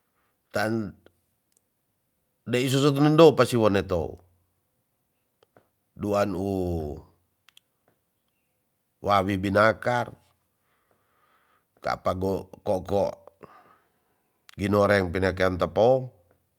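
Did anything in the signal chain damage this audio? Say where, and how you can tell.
No, nothing in the signal chain has audibly damaged this speech recording, and no stage from capture to playback leaves a mark on the signal.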